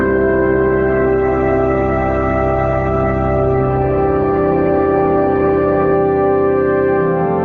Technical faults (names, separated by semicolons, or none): adaptive stream starting at a low bitrate